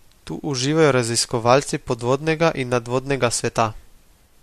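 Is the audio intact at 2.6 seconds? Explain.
Yes, at 2.6 seconds the speech plays through intact, with no fault present at that moment.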